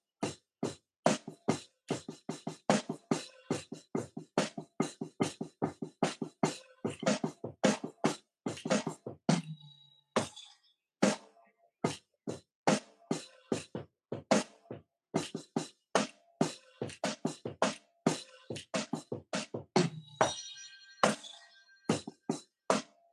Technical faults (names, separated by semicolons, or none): none